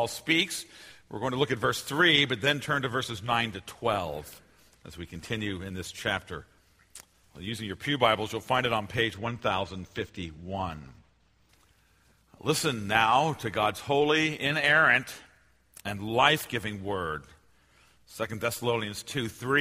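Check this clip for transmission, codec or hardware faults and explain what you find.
A channel delay (comb filtering) fault appears from 9.14 to 11.49 s. One channel arrives a couple of samples late, roughly 0.05 ms, and summing to mono cancels content near 10 kHz. The audio turns dull, and a spectrogram shows a fixed dark notch band there.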